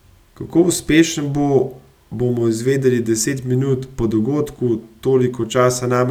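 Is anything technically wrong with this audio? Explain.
No, nothing technically wrong can be heard here.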